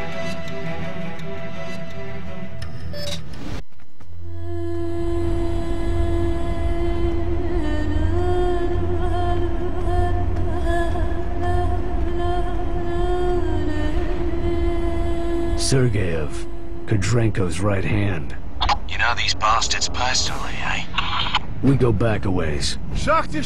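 No technical faults are audible.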